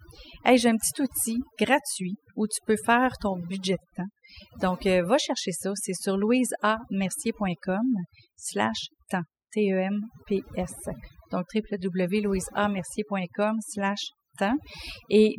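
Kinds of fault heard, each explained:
Overdone noise removal: the denoiser's cranked way too hard, so the gaps go near-silent with little twinkly specks.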